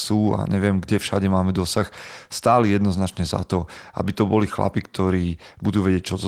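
No technical faults can be heard in this speech clip. The Opus voice compression keeps the full audio band, and its coding leaves only a light trace on the sound.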